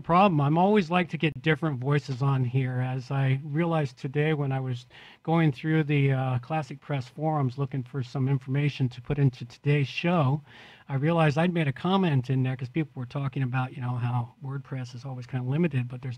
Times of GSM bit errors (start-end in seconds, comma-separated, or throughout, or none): none